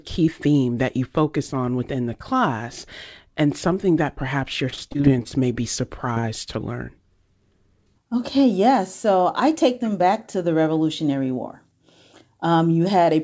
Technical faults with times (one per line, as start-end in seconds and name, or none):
4.70-5.33 repeated packet loss (robotic sound)
6.14-6.18 short concealed packet loss
6.20-6.25 short stall from a late packet